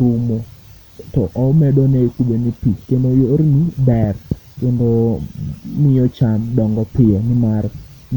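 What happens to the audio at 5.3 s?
Nothing goes wrong at 5.3 s; the audio is intact at that moment.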